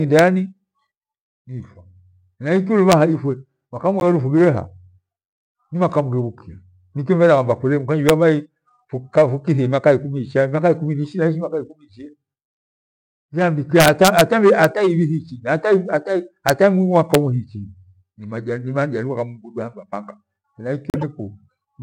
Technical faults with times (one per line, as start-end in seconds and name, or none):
0.19 integer overflow
2.92 integer overflow
4.00-4.02 corrupt frame decoded
8.09 integer overflow
13.80-14.21 integer overflow
14.64 integer overflow
16.49 integer overflow
17.14 integer overflow
20.90-21.03 corrupt frame decoded